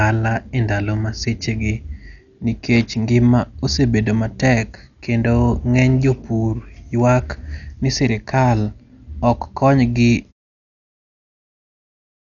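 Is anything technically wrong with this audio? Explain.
Yes. Heavy Dolby Digital compression runs through the whole speech clip. Nothing is heard above about 6.9 kHz. The likely cause is a low-bitrate AC-3 encode, consistent with 48 kbps. Many frequency lines got no mantissa bits and were refilled with noise. The sound is dull, with rough, fluttering hiss around tones. The fade-out near the end is smooth and deliberate.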